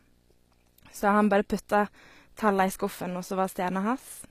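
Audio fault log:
throughout, video or display buzz: a buzz at 59.94 Hz with hash riding above it, plus a thin tone up at 15.7 kHz, sitting roughly 35 dB under the speech. That's a screen or video cable leaking its field rate and line rate into the audio path.
throughout, HE-AAC compression: the treble sounds plainly synthetic, s sounds come out gritty and metallic, and there's nothing above 14.9 kHz. This is likely HE-AAC at a low rate, something around 24 kbps, rebuilding the highs from copied lower bands that don't match the real harmonics.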